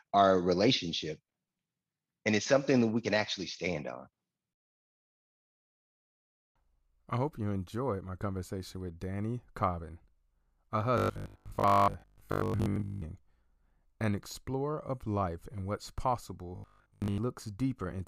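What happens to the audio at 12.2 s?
At 12.2 s the speech has turned into a rigid, metallic buzz fixed at 50 Hz that still loosely follows the words, from 10.98 to 13.04 s. This is robotic sound from repeated short buffers, likely a 20 ms chunk replayed in place of most of the real audio.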